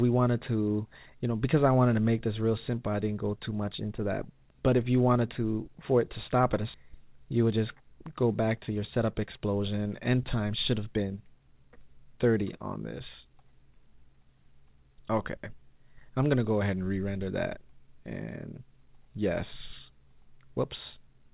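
The audio comes through a call path that has nothing above 4 kHz, which fits G.711 A-law at 64 kbps. At 6.74 s there's a skip ahead: roughly a second of audio just vanishes and the two sides are butted together with no gap. That's a stretch dropped in transit or thrown out by an overflowing jitter buffer while later audio was already queued. Right after, from 6.84 to 7.74 s, and again from 8.69 to 9.86 s, you get jitter buffer speed-up. The pitch holds, but things run at 106% and then 109%, so both stretches sound hurried. The receiver was trimming repeated pitch-period-sized slivers to drain a backlog, removing somewhere under a tenth of a second the first time and about a tenth the second.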